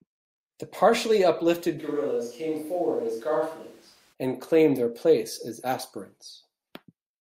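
From 1.80 to 4.12 s, after "partially uplifted", the speech turns suddenly roomy, hollow and about 5 dB quieter. This is likely a switch to a distant microphone. It snaps back at "and claim their place".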